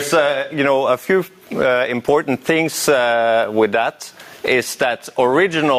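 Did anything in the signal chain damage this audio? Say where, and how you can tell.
Yes: gain pumping throughout, likely from excessive input gain driving a fast limiter. The gain swings around 20 dB under loud sounds, unlike steady clipping distortion.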